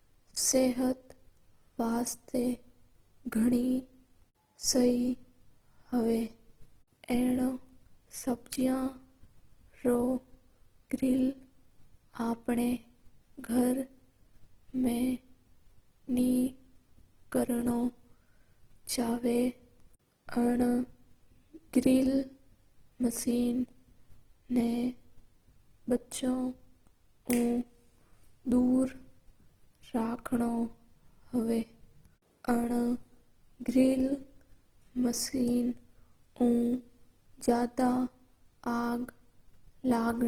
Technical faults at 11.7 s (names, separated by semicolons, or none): Opus compression